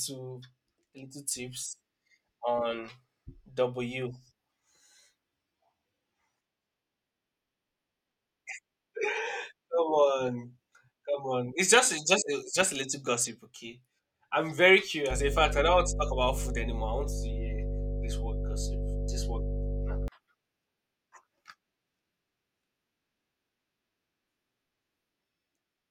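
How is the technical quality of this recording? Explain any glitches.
The technical quality is compromised by one fault. Mains hum appears from 15.11 to 20.08 s, right after "gossip okay I'm very". A ground loop or nearby transformer leaks the 50 Hz power line into the signal. It sounds like a steady low drone with some low harmonics, roughly as loud as the speech.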